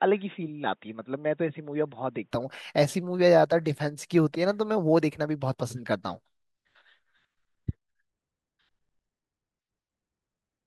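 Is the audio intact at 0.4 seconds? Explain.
No. At 0.4 s the speech sits inside a stretch from 0.0 to 2.31 s that sounds as if the input switched to a poorer device. Nothing reaches above 3.8 kHz, the level is about 5 dB lower, and a faint new noise floor sits roughly 45 dB down, giving a dull, boxy tone. The likely cause is a narrower-band microphone feeding the recording until the full-band input takes over at 2.31 s, with no gap at the switch. On a spectrogram the region above 3.8 kHz is empty until 2.31 s, and the waveform is visibly smaller before that point.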